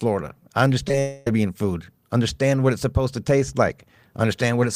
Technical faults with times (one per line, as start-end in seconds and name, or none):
0.88-0.94 short concealed packet loss
0.99-1.27 long network dropout